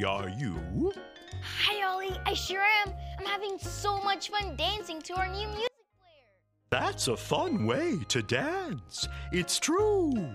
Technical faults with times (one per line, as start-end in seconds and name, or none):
5.67-6.72 audio dropout to a faint residue